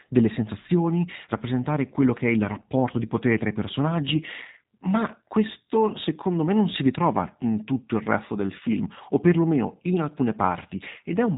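From start to finish the speech sounds slightly rough and synthetic, with a muffled, telephone-like top end where nothing above about 3.8 kHz comes through. These are the marks of the G.729 codec, plainly audible here. Each 10 ms frame is rebuilt from a vocal tract filter, a pitch predictor and a handful of pulses rather than from the original waveform, and the sparse, buzzy quality fits a low bitrate of around 8 kbit/s.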